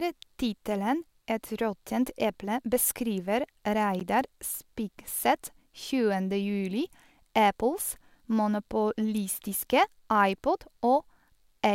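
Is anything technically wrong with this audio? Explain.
Yes. At 4.00 s, just after "eple beskriver", a Bluetooth stall is the likely cause: delayed packets emptied the headphones' buffer, so the speech cuts to about 13 ms of silence, then resumes.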